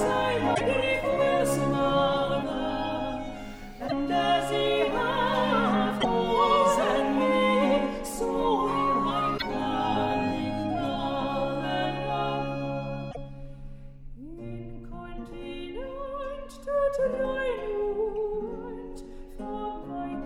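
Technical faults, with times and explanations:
0.51–0.61, 3.85–3.92, 5.97–6.05, 9.34–9.42 and 13.08–13.17 s: damaged data in a compressed stream. Corrupted bytes make the decoder misread these frames and lose sync until it finds a valid header, so each spot gives a brief glitch lasting about 70 to 100 ms.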